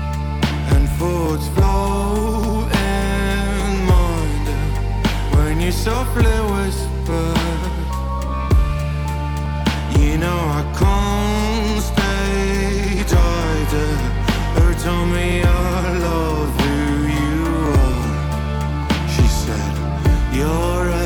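From 1.26 s to 20.0 s, a click every 1.17 s, about fifteen times: likely clock drift buffer slips, two clocks roughly 700 ppm apart.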